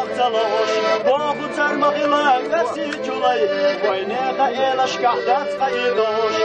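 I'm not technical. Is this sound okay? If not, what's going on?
Yes, this sound is okay, and nothing is going on with it that needs fixing.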